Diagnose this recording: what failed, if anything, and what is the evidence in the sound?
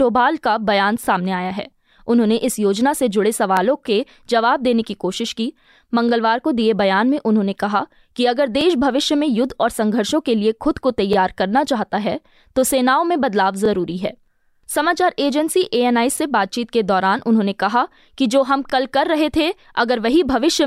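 Overlapping chunks at the buffer or chunking stage: each block of about 2.5 s restarts 21 ms early, so a short stretch of speech replays, producing ticks at 1.05, 3.57, 8.61, 11.13, 13.66, 16.18 and 18.70 s. On a waveform each tick is a duplicated 21 ms segment, and on a spectrogram it is a thin vertical line.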